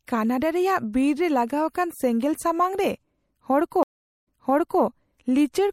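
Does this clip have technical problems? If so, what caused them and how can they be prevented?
Yes. Throughout, the speech sounds watery and swirly, with metallic chirps on s sounds and dulled treble, likely from MP3 compression at a low bitrate around 64 kbps that cuts the high band and zeroes weak lines frame by frame. Unlike broadband noise, this damage follows the speech itself. Encoding at a higher bitrate prevents it.

From 3.83 to 4.82 s there is a stream reconnect. The sound drops to silence for 0.43 s while the player rejoins, then a fresh decoder resumes 0.55 s earlier, so material is heard twice rather than lost as in a plain dropout. A larger playback buffer with seamless reconnection prevents this.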